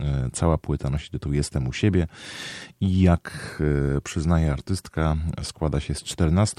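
No technical faults can be heard at any point in the speech, so there are none to describe in time order.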